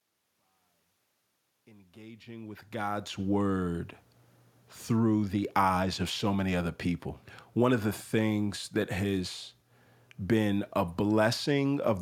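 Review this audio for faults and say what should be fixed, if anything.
No faults found and nothing needs fixing; the speech rises in a smooth, deliberate fade-in from the opening to about 3.21 s, with no click or hard edge.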